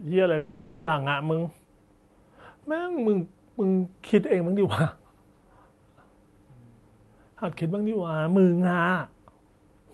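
At 0.37 s the speech gives way to a buzzy, smeared continuation of the last sound. It fades over about half a second. Real speech returns at 0.89 s, with that stretch gone. This is likely a long network dropout, concealed by the receiver. The call-codec band limit near 12 kHz can be heard throughout.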